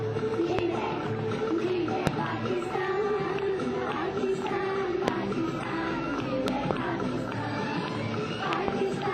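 Loud pops at 0.59–0.61, 2.07–2.09 and 5.08–5.10 s, and paired pops at 6.48–6.73 and 8.53–8.70 s, each spike about 20 dB above the sound, likely voltage glitches from a plug, switch or driver.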